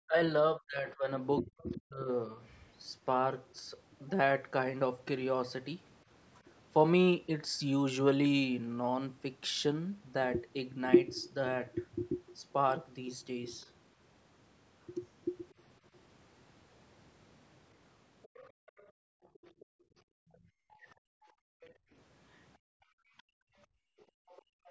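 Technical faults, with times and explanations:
0.06–2.39 s and 24.56–24.67 s: speech suppressed in double talk. The talker's level falls by up to about 40 dB in pieces, about a second in total at first, then a brief dip near the end. This is likely the echo canceller ducking both voices during simultaneous talk. It appears as waveform notches.
1.58–1.77 s, 3.50–3.55 s, 13.61–13.66 s, 15.50–15.54 s: other side's voice leaking through. Faint scraps sit about 35 to 40 dB below the speech, likely uncancelled loudspeaker echo. They show as thin, isolated smudges on the spectrogram.
18.22 s to the end: other side's voice leaking through. A sustained second voice runs about 30 dB under the talker, likely residual loudspeaker echo. It appears as a weak, separate harmonic pattern throughout that stretch.
18.52–24.27 s: background gated by the echo canceller. The room sound drops by up to about 39 dB, for around four seconds in all, as the microphone is clamped during playback. 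On the waveform and spectrogram the noise floor falls to near-silent gaps.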